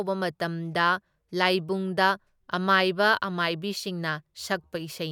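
A short bit of speech, and there's nothing technically wrong to point to anywhere in it.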